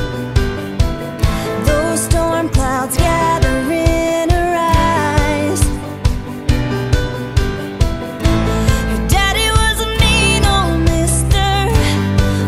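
Nothing in the recording stood out as a technical problem on listening.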